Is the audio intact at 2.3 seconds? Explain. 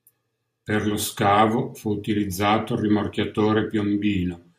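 Yes, at 2.3 seconds the speech plays through intact, with no dropout, click, distortion or other fault at that moment.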